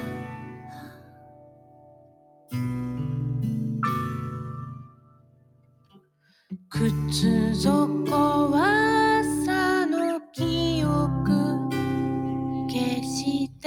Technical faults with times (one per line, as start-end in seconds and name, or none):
0.00-13.66 noise suppressor applied to music or sounds
0.00-2.53 sound cut by the noise suppressor
4.78-6.71 sound cut by the noise suppressor
13.48-13.65 sound cut by the noise suppressor